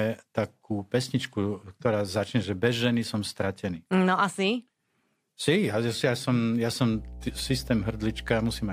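A speech recording with a mains hum that enters at 6.93 s and runs to the end of the clip. It is a steady low tone at 60 Hz with some low harmonics above it, sitting fairly high, not far below the speech. It comes from power-line current coupling into the signal, through a ground loop or a nearby transformer. Unlike broadband noise or rumble, it holds one fixed pitch.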